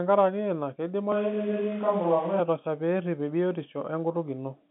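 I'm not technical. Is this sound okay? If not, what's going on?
No. From about 1.12 to 2.40 s, just before "pee eripp", the speech suddenly turns roomy and hollow, loses its body in the low end, and more background noise comes up, all while the loudness stays about the same. That pattern is what a switch to a distant microphone sounds like: the close microphone likely dropped out and a farther one took over. Unlike muffling or added echo, it begins and ends abruptly. The narrow telephone sound throughout is just the phone line.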